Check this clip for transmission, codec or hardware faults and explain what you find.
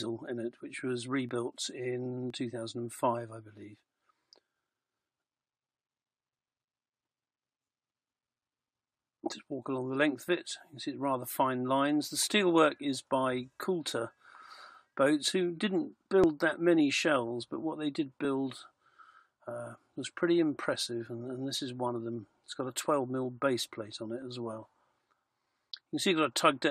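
One transmission fault recurs: overlap between stream segments, heard at 1.29, 2.30, 12.27 and 16.24 s. The stream arrives in 1.0 s segments whose time stamps overlap at these boundaries, so the player trims the overlap even though that sound was never duplicated. Each time, roughly 11 to 15 ms of real audio is discarded and the waveform jumps straight across the gap, producing a brief click or tiny skip at those boundaries.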